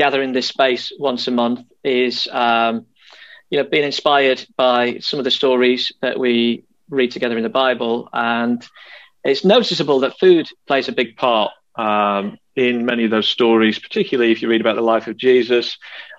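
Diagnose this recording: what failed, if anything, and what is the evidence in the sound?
Wrong sample rate at playback: 0.0 to 11.04 s runs 1.09 times fast and 1.47 semitones sharp, which fits 44.1 kHz samples clocked out unconverted at 48 kHz.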